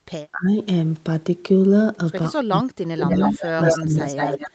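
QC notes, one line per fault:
0.31–0.55 s, 2.44–3.19 s and 3.35–4.4 s, speech suppressed in double talk: with both ends talking at once, the echo canceller likely could not tell the near talker apart from loudspeaker echo and turned everything down. The speech sinks in patches: about 20 dB for roughly a fifth of a second in the first span, as much as about 40 dB over about half a second in the second, and about 20 dB again across roughly 0.7 s in the third.
3.05–3.81 s and 4.01–4.51 s, echo leak: a far end playing the call on a loudspeaker likely left part of its microphone pickup uncancelled and sent it back. A second copy of the speech trails the original by 181 ms, at about the same level in the first span and about 5 dB quieter in the second. It overlaps the suppressed stretches near the end.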